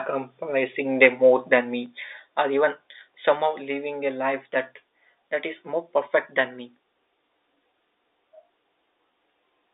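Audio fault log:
1.04 to 1.06 s, microphone overload. A loud peak turns briefly harsh and crackly. The waveform tops look flattened, with a small share of samples, around 3 percent, pinned at the limit. The peak tries to go roughly 3 dB past full scale. The likely cause is input gain set too high, so the converter ran out of range and sliced off the crests. Those flat tops add buzzy overtones.
1.86 s, microphone volume stepped down. Under a second after the distorted peak, the whole level drops at once by about 3 dB. The speech and the background noise fall together, in a single step rather than a fade. That points to an input-volume change, likely automatic gain control in the call software reacting to the clipping. The sound passes through the 300 to 3700 Hz line.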